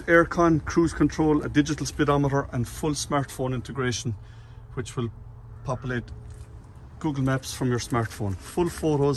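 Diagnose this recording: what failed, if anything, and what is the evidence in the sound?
Nothing failed; no stage shows any audible fault.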